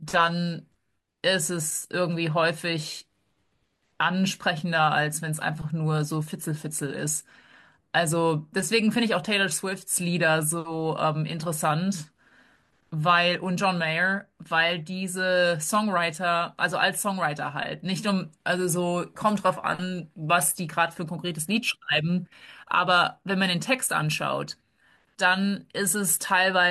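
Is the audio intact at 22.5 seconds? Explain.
Yes, at 22.5 seconds the speech plays through cleanly, with no dropout, click, distortion or other fault to be heard.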